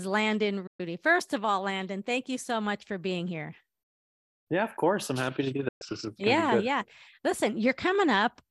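A speech recording with two abrupt holes: at 0.67 to 0.80 s and again at 5.68 to 5.82 s the audio fades out over about 8 ms and stays silent for roughly 120 ms. This is a digital broadcast dropout, where the receiver muted after losing a short run of frames, and whatever was sent during each gap is gone. From 5.28 to 6.09 s, between "of course I'm" and "yeah yeah", the level flutters by about 6 dB around 30 times a second, a rough tremolo. That is overlap-add ripple: the audio was rebuilt from windowed frames whose overlap does not sum to a steady gain, so loudness pulses once per frame. The second dropout falls inside this rippling stretch.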